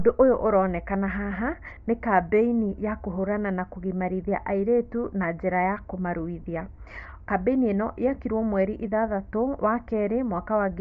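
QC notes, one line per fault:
Throughout: Bluetooth LC3 compression, likely. The upper spectrum sounds thinned and noise-filled, giving speech a breathy, grainy edge that fits a 32 kbps LC3 stream.
1.76 s and 6.42–6.44 s: lost LE Audio frames. The first gap falls between "ũyũ ũronekana haha" and "nĩ kambeini ya kũhũrana". The decoder refilled about 10 ms, then 20 ms, with reused spectrum, producing brief noisy smears.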